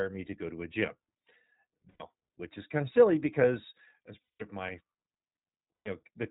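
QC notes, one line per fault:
Throughout, iLBC codec: everything above 4 kHz is gone. Speech sounds clear but rough and slightly synthetic. This fits the 15.2 kbps, 20 ms frame mode.
1.90–2.02 s, 4.22–4.43 s and 5.77–5.88 s, lost iLBC frames: the decoder repeats the last pitch cycle mixed with noise, so each gap sounds like a held, buzzy vowel. Recovery is immediate, as the first gap clears before "which is kind of". The longest gap follows "of silly because as".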